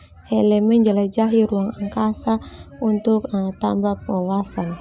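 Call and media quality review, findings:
Nothing stood out on listening to this speech recording.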